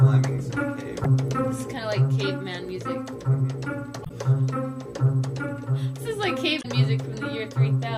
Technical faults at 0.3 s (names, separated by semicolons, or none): none